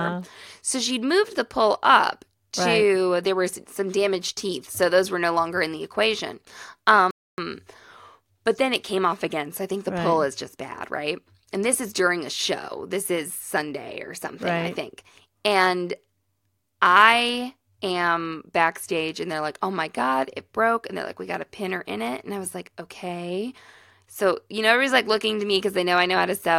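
At 7.11 s a playback stall occurs, likely because the player ran short of buffered data or its output thread was held up. The speech cuts to silence mid-flow for about 0.27 s, then resumes at 7.38 s.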